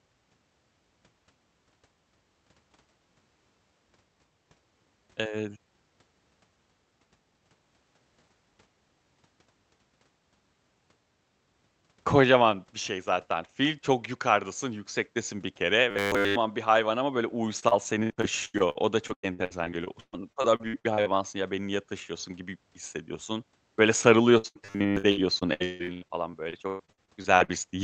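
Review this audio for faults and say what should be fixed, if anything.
Robotic sound from repeated short buffers at 15.91–16.37 s (after "yukardasın yüksektesin bir kere") and 24.66–24.97 s: a likely 10 ms loop imposes a 100 Hz buzz, seen as rigid harmonic stripes and identical repeating waveform cycles.

Repeated packet loss (robotic sound) at 17.59–21.24 s (after "bir hayvan ama böyle", before "ya beni niye taşıyorsun") and 24.38–27.56 s: about two dozen holes each, up to 120 and 155 ms, patched by smeared continuation, showing as choppy spectrogram breaks.

A larger, adaptive jitter buffer with steadier network delivery and timely audio-thread scheduling would prevent both.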